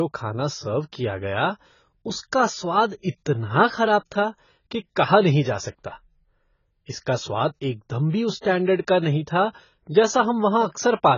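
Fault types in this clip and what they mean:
AAC compression: The whole speech clip sounds dull and muffled, with nothing above 7 kHz, so sibilants lose their edge and sustained vowels take on a smeared, warbling, fizzy texture. The damage is heavy throughout. The likely cause is low-bitrate AAC-LC coding, which fits a rate around 16 kbps: the encoder drops the high band entirely and quantises the remaining spectrum so coarsely that gaps and substitute noise replace real detail.
pre-echo: Around 8.41 to 8.44 s, between "स्वाद एकदम भी उस" and "का नहीं था", a short hiss creeps in about 34 ms before a sharp onset, and the attack itself sounds softened and blurred. It happens because the codec spreads its quantisation noise evenly across a transform block. When a sudden loud sound lands late in that block, the noise budgeted for it also fills the quiet stretch just before, smearing the attack backwards in time.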